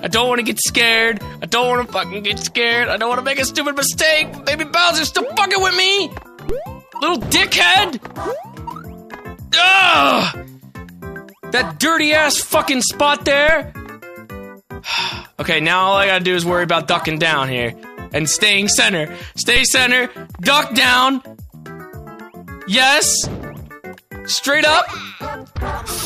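At 6.49, 13.49 and 19.56 s the waveform's zero line jumps, a DC step of about -11, -11 and -9 dBFS, each heard as a low thump that dies away as a 5 Hz high-pass drains the offset.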